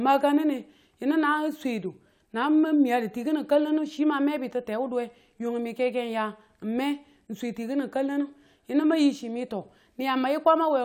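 Nothing goes wrong anywhere in this recording, so there's no fault to point to at any moment along the way.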